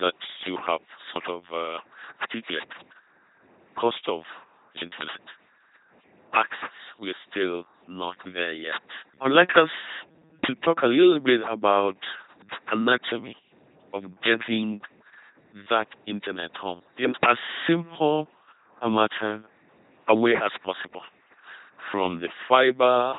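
Throughout the speech, an LPC-10 vocoder at 2.4 kbit/s replaces the voice with a ten-pole filter driven by either a buzzing pulse train or hiss. Each moment is forced wholly voiced or unvoiced, giving a heavy mechanical robot tone, with nothing heard above about 3.9 kHz.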